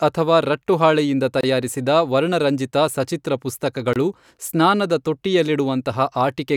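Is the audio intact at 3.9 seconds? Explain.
No. A gap between chunks interrupts the speech from 3.93 to 3.96 s. The audio is split into chunks about 2.5 s long. At this join, about 25 ms of silence sits between one chunk and the next. Nothing is missing from the speech itself. It is simply paused. The result is a brief hole with abrupt edges. The sound cuts off sharply and then resumes just as sharply.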